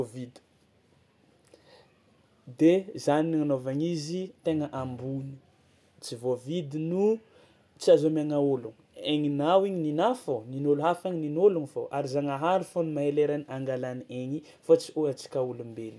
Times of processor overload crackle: none

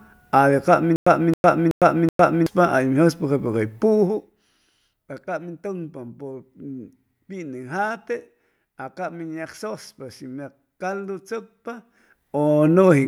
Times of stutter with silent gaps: 0.96-2.46

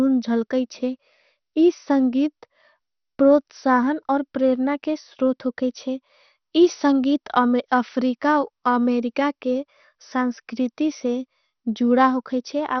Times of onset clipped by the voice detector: none

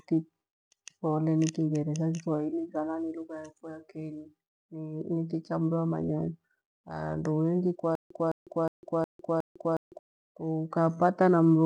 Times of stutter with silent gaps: 7.95-9.99

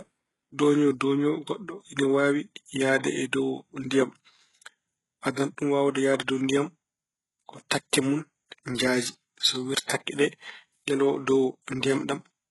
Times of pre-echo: 9.87-9.89

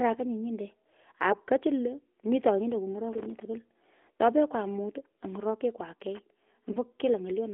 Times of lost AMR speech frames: 6.72-6.78

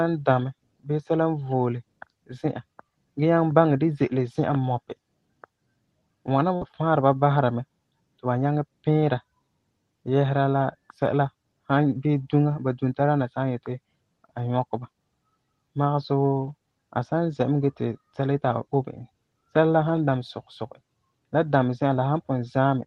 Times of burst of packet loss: 6.55-6.64

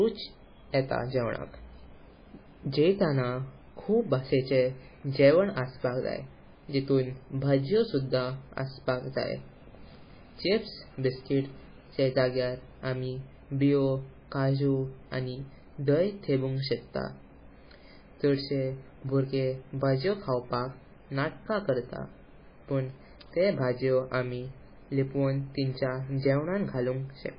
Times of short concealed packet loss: none

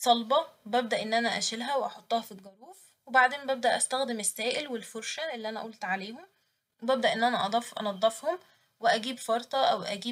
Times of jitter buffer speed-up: none

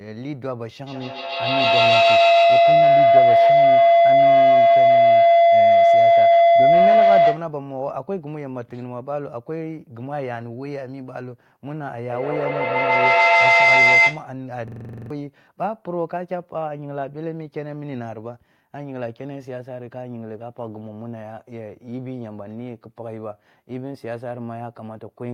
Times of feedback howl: 0.87-7.55, 12.09-14.33

